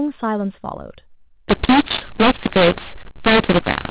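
Mu-law and A-law mixed up from 1.49 s to the end: the telephone speech, coded with mu-law, is decoded as A-law, which scrambles sample levels. The speech turns harsh and distorted, and pauses fill with noise as the quietest samples rise well above silence.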